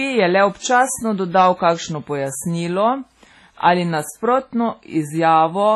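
A speech recording with two faults. Throughout, the audio carries layered coding artefacts and nothing above 12 kHz, which points to transcoding between lossy codecs, likely a low-rate WMA encode of around 24 kbit/s followed by MP3 at around 40 kbit/s. The MP3 stage spent its bits re-encoding the earlier artefacts and added its own. From 1.38 s to 1.69 s there is hard clipping. The signal was driven about 4 dB past what a stage could pass, so the peaks were cut flat and crackle from the added high harmonics is heard on the peaks.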